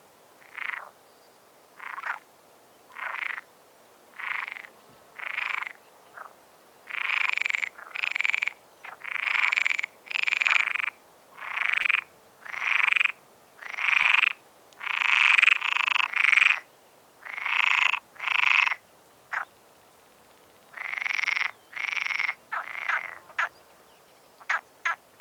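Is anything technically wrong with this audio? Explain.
Yes. Short concealed packet loss at 11.81–11.85 s and 14.01–14.05 s: about 20 ms arrived late, so the decoder extended the preceding sound and blended back, leaving brief smears.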